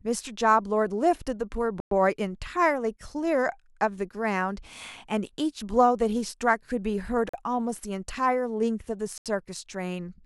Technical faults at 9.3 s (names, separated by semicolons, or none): Bluetooth stall